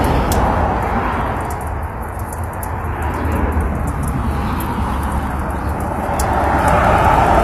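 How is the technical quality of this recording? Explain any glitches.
The recording has plainly audible compression damage throughout. Nothing is present above 14.9 kHz. The treble sounds rebuilt rather than captured, likely from HE-AAC compression. That scheme codes only the lower spectrum. It copies those bands upward to fake the highs, so the top end turns gritty and metallic. The plainly audible damage fits a low bitrate near 24 kbps.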